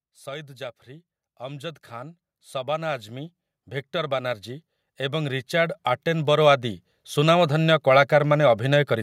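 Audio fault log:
0.24–3.40 s and 3.92–7.46 s, automatic gain rising: the level climbs steadily by about 8 dB over the first span, then by about 10 dB over the second, as the gain control judges the input too quiet and turns it up. Speech and background noise swell together over several seconds, which separates this from a louder talker or closer microphone, where only the voice would grow and the noise floor would stay put.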